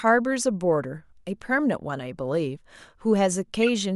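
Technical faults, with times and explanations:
3.63 to 3.69 s, corrupt frame decoded: right near the end of the speech there's a short glitch lasting about 60 ms. A few consecutive compressed frames arrived with flipped bits, and the decoder played them instead of concealing them. The misread gains and codes dumped energy into the wrong frequency bands, so you get a glitch peaking around -15 dBFS that lasts as long as the damaged run, consistent with roughly 20 ms frames.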